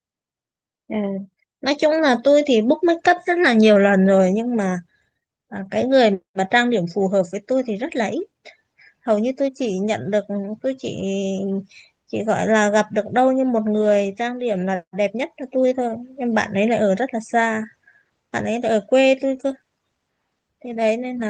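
No technical faults are audible anywhere in the speech recording.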